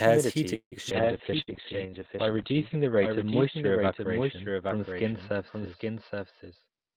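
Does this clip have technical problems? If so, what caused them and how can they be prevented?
Yes. A doubled audio track runs through the whole clip: a second full-band copy follows roughly 0.7 s behind at about 5 dB below the original, with no room colour. It is likely caused by the audio being captured twice, once through a slower path. Routing capture through a single path, with echo cancellation on, prevents this.

A call audio freeze runs from 0.55 to 0.75 s. The sound is stretched into a fading continuation of the last sound and then about 100 ms of silence, and it resumes where it stopped, leaving roughly 160 ms of added delay. This likely happened because packets were held up and the jitter buffer ran empty. A steadier network or a deeper jitter buffer prevents it.

A skip ahead follows at 0.90 to 0.94 s. Playback jumps forward over roughly 70 ms of audio, and the two sides are joined almost directly because a stretch of audio was dropped. 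A jitter buffer that trims gradually instead of discarding chunks avoids it.

A call bitrate drop starts at 0.92 s and lasts to the end. The encoder falls from 32 to 7 kbps and stays at its lowest for about 1.6 s. The band narrows from 20 kHz to 4 kHz, so the sound becomes muffled and coarse. More reliable bandwidth, or a higher minimum bitrate, prevents this.

A jitter buffer slow-down runs from 1.01 to 1.91 s. The receiver repeats pitch periods to add 66 ms, so the audio plays at 93% speed at the same pitch and sounds drawn out. A stable network that keeps the buffer filled removes the need for it.

A burst of packet loss hits at 1.42 to 1.50 s. About 55 ms is filled with a fading continuation of the previous sound, and 60 ms of audio is missing when playback resumes. Forward error correction or a less congested connection guards against it.

A jitter buffer speed-up runs from 6.28 to 6.95 s. 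The receiver removes short pitch-period pieces, roughly 100 ms in total, so the audio plays at 114% speed and sounds hurried. Avoiding the delayed, bunched packet arrival that overfills the buffer prevents it.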